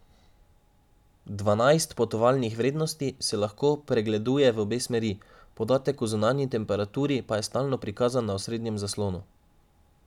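Listening through this speech recording, nothing technically wrong stood out at any point.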